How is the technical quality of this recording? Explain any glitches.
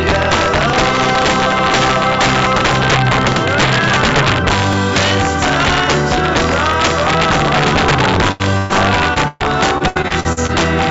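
The technical quality is poor. Several distinct faults are audible, and the later part of the recording is heavily disrupted by network losses. Everything has also passed through a call path, with nothing present above 8 kHz, which fits a wideband codec such as G.722.

Integer overflow runs through the whole recording. The signal is driven roughly 5 dB past the top of the integer range, and a small fraction of the samples, around 2 percent, exceed it. Those samples are not limited at full scale but wrap around to the opposite extreme, so each loud peak jumps across the entire range. The result is harsh, violent cracks on the loudest moments, far sharper and more abrupt than ordinary clipping distortion.

Periodic USB or driver dropouts occur between 0.73 s and 6.74 s, spaced 2.0 s apart, about four in total. Each time, something stalls the USB transfer or audio driver, and roughly a millisecond of audio is skipped outright rather than replaced with silence. 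Because the waveform jumps forward at each point, you hear a small, regularly timed tick or click. These ticks are only noticeable where sound is present.

A burst of packet loss occurs three times: at 8.32 to 8.42 s (80 ms missing), at 8.58 to 8.71 s (120 ms), and at 9.28 to 9.42 s (120 ms, 10 ms of it silent). In each case the receiver had nothing to play, so it extended the preceding sound and let it fade. This produces a held buzz or dying hiss, after which the audio resumes with that stretch simply gone.

Short concealed packet loss occurs at 9.14 to 9.18 s, where about 20 ms failed to arrive in time. The decoder bridged the hole by continuing the last sound for roughly 18 ms and then blending back into the real signal. The result is a brief smear or wobble rather than an outright gap, though anything very short at that instant may be lost.

Repeated packet loss (robotic sound) covers 9.78 to 10.51 s. 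Seven separate gaps fall within this span, totalling about 240 ms, and the longest is 75 ms. About a third of the span is therefore synthesized concealment rather than real audio. With patches following one another so closely, the sound turns choppy, and pieces of the original are missing throughout.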